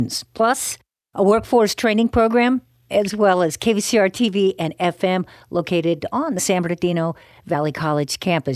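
Nothing in this speech recording goes wrong on the technical side, so there's no fault here to point out.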